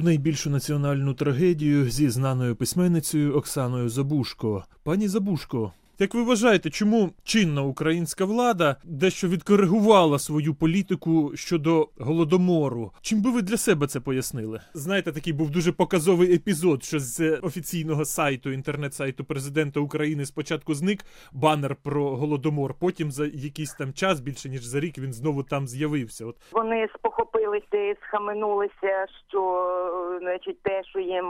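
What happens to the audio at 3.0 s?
Nothing goes wrong at 3.0 s: the audio carries on intact through that moment, with no dropout, click, distortion or other fault.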